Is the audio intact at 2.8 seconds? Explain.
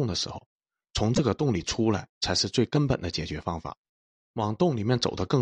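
No. At 2.75 s a corrupt frame was decoded: flipped bits in one compressed frame put energy at the wrong frequencies, giving a brief chirp-like blip with an error peaking near -15 dBFS. Unlike a lost-packet dropout, nothing repeats; wrong sound is added instead.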